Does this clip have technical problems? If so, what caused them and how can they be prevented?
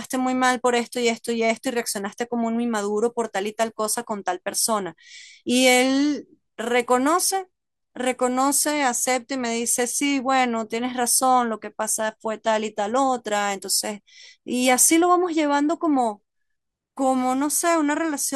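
No, this clip has no technical problems, so there is nothing to trace to a cause or prevent.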